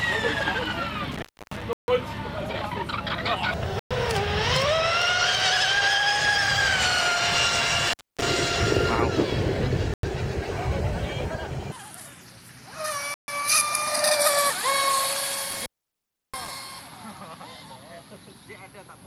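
An intermittent contact at 1.12–1.62 s, 7.87–8.23 s and 15.50–16.49 s opens the line for about 290, 250 and 680 ms, giving crackle-edged dropouts that show as broadband clicks around low hiss. Clean silent gaps at 1.73–1.88, 3.79–3.91, 9.94–10.03 and 13.14–13.28 s (about 94–150 ms) are likely Bluetooth stalls: flat, empty waveform sections before the sound resumes.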